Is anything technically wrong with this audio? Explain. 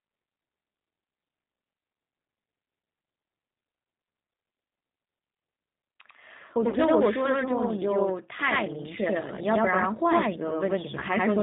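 Yes. From start to finish, every sound is followed by a second copy at equal level about 92.9 ms later, heard as a doubled, slapback texture. This is channel delay (doubling): one channel runs late by what fits a 4096-sample buffer, and the two are summed to mono.

Throughout, the speech also sounds rough, slightly synthetic and dull, with nothing above 4 kHz. That points to the G.729 codec at 8 kbit/s, which rebuilds speech from a vocal tract filter, a pitch predictor and a few pulses.

From 6.69 to 6.76 s and from 10.99 to 11.04 s, the speech smears into a buzzy tone or coloured noise that fades. This is VoIP packet loss concealed by the speech codec: the decoder extrapolates from its last pitch and filter across about 40 ms and 20 ms of missing audio, respectively.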